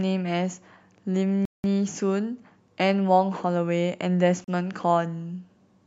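Speech, interrupted twice by dead silence: about 0.19 s from 1.45 to 1.64 s, and 37 ms from 4.44 to 4.48 s. Each gap shows as a flat waveform and a blank vertical band on a spectrogram. These are likely Bluetooth stalls, where delayed packets emptied the playback buffer.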